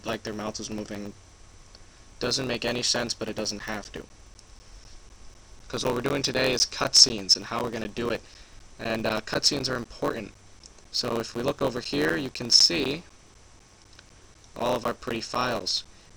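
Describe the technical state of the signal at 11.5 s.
At 11.5 s, two faults are active. A block size mismatch (truncated) runs through the whole clip. One stage writes longer blocks than the next reads, so each block's tail is dropped. This puts a buzz at about 91.9 Hz into the sound and makes the audio run 1.07 times fast. The block rate fits 512-sample written blocks.

Periodic USB or driver dropouts also fall here, in a run from 3.6 s to 16.1 s. A recurring stall in the bus or driver drops around 10 ms of audio every 0.25 s and fills the gap with silence. The result is evenly spaced ticks or pops, roughly fifty in total.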